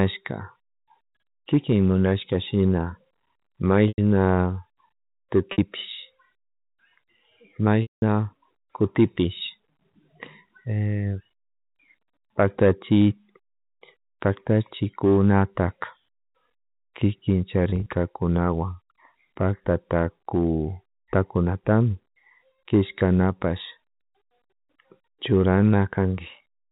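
At 3.88 s, 5.52 s, 7.82 s and 17.7 s the speech shows packet loss with pitch repetition: audio went missing for 100, 60, 200 and 80 ms, which fits 20 ms packets, and the receiver bridged each gap by replaying the last pitch period. The shorter gaps sound like a briefly held, buzzy tone, while at 7.82 s the repetition fades to silence before speech cross-fades back in. At 17.7 s the losses are scattered over 160 ms in runs of no more than 20 ms. A spectrogram shows frozen, evenly spaced harmonic stripes with no formant movement, and the waveform shows identical repeating cycles tapering in amplitude, all within the telephone band below 4 kHz.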